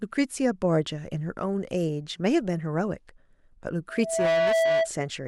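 A microphone picking up the loudspeaker it feeds closes a loop, and at one frequency that loop's gain has gone above one. From 3.89 to 4.90 s this loudspeaker feedback squeal grows out of the speech as a single tone at 656 Hz, swelling over a little under half a second and then sitting a few decibels above the speech itself, a steady howl that rides over everything until it stops.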